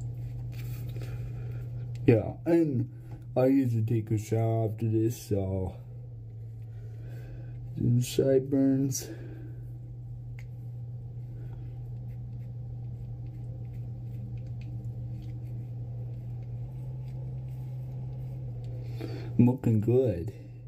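At 6.14 s the sound suddenly drops in pitch and slows, then returns to normal at 7.05 s. Speed falls by 5.75 percent, about a semitone down (103 cents). At 16.66 s the opposite happens: speed rises by 5.75 percent and pitch climbs about 97 cents until 18.47 s. Pitch and tempo move together, so this is likely a drift correction step, where clock-matching software changed the playback rate in one jump.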